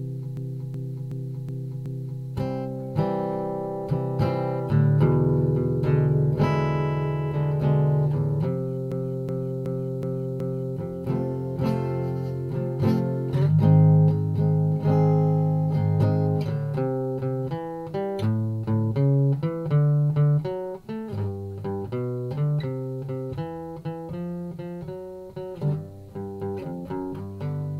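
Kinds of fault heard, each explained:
System hang loop: the driver or system stalled while the audio hardware kept replaying one ring buffer. A 0.37 s segment repeats five times at about 2.7 Hz, from 0.37 to 2.23 s and 8.92 to 10.77 s, a slow stutter that fits a 16384-sample buffer.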